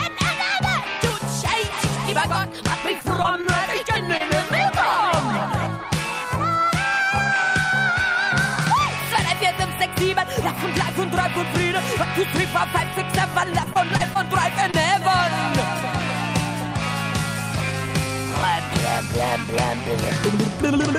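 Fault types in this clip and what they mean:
Repeated packet loss (robotic sound): Short dropouts come in quick succession, each patched by repeating the last sound. The audio turns choppy around 2.63 to 3.45 s and 13.64 to 14.17 s.
Short concealed packet loss: Each 20 ms hole was filled by continuing the previous sound. It leaves a brief smear near 4.17 s and 14.71 s.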